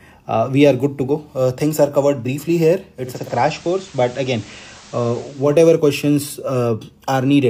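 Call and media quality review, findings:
Digital radio blending to analogue, 2.95 to 5.59 s: hybrid receiver lost digital lock and cross-faded over about 0.43 s to FM simulcast, then back. Hiss appears roughly 25 dB under programme, no level step.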